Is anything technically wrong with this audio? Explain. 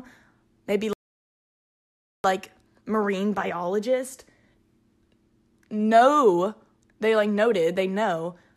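Yes. At 0.93 s the speech drops into a rebuffering stall: playback exhausted its downloaded audio and halted until more data arrived. Silence holds until 2.24 s, then the speech resumes exactly where it stopped, with nothing lost but 1.31 s added.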